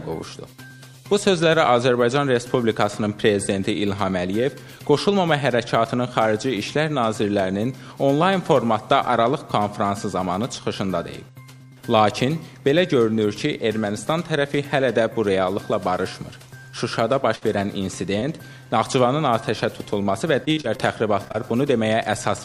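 At 17.35 to 17.43 s a burst of packet loss is heard: about 60 ms of lost audio is bridged by a held, fading continuation, and the sound resumes with that stretch missing. It is longer and more obviously sustained than the brief smears that follow. Short concealed packet loss then appears at 18.19, 18.63 and 20.03 s, and again at 21.25, 21.28 and 21.32 s. Each is a single hole of about 20 ms, patched and blended back, and is heard as a quick smear or wobble. From 20.45 to 20.81 s, repeated packet loss (robotic sound) sets in. Four gaps of up to 39 ms are patched in close succession, filling about 30% of the span, so the sound turns choppy rather than briefly blurred.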